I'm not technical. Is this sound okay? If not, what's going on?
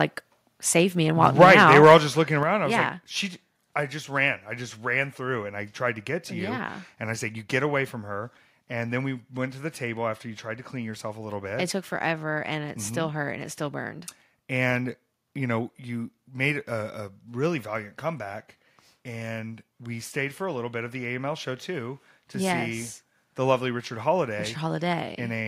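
No, not quite. From 1.25 to 1.96 s the speech turns harsh and crackly on its loudest moments. That's microphone overload: the input was likely set too high, so the tops of those peaks got chopped off, and a small share of the sound is flattened.

Then there's the microphone volume stepped down: at 1.44 s there's a slight sudden drop in level, and at 2.43 s a much bigger one. Voice and background fall together, which points to the call software likely turning the mic down after catching that distortion.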